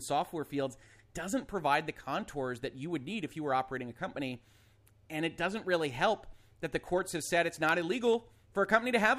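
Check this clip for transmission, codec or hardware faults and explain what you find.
There's one fault: periodic USB or driver dropouts from 6.28 s to 8.71 s. Every 64 ms or so, something blocks the USB bus or the audio driver, and a tiny sliver of audio, well under a millisecond, gets skipped outright rather than padded with silence. That happens around forty times, so you hear a steady, fast ticking riding on the speech, present only while there's signal.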